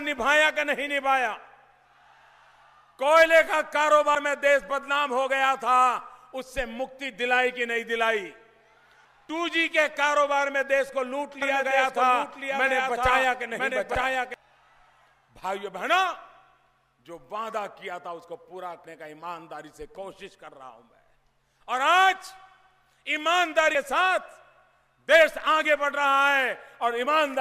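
At 4.15 s the sound jumps forward, with about a tenth of a second missing and the two sides butted together without a gap. This is audio missing between chunks, likely from a recorder handling the stream in 5 s pieces and dropping a sliver at each handover.

From 11.42 s to 14.34 s a second, full-band copy of the sound runs roughly a second behind the original and about 5 dB quieter. It has no decay or room colour, and it cuts in and out abruptly. This is a doubled audio track, likely a slower capture path mixed in with the main one.

The same skip recurs at 13.95 s, inside the doubled stretch, then at 18.85 s and 23.75 s, keeping the 5 s spacing.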